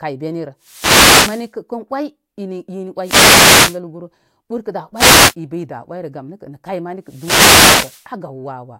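Four wireless microphone noise hits land in this speech, at 0.60 to 1.52 s, 3.01 to 3.80 s, 4.95 to 5.35 s and 7.04 to 8.08 s. Each time the FM radio link dips as reflected signals cancel at the receiver, so its noise floor climbs up through the audio. You hear a swish or burst of static lasting from about 0.4 s to just over a second.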